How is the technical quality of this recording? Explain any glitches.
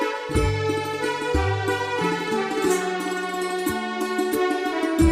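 The technical quality of this recording is sound, with no glitches to explain.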